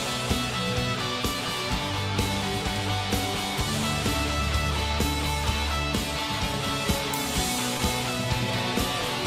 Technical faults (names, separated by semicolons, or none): short concealed packet loss